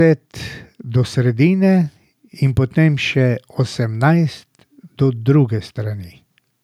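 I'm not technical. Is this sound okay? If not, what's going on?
Yes, it's fine: nothing in this recording sounds broken or wrong, so there's nothing to fix.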